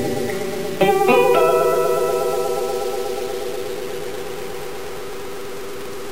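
From start to end, the sound is coarse and grainy, with a gritty distortion that tracks the signal. This is likely low bit depth without dither, truncated to about five bits, leaving error only some 15 dB below the signal.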